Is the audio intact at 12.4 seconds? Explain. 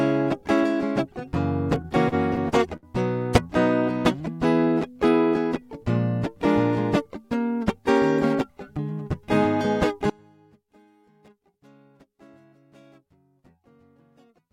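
No. From 10.10 to 14.53 s the music drops by about 30 dB to a faint residue, likely one channel inverted so that mono summing cancels the shared content.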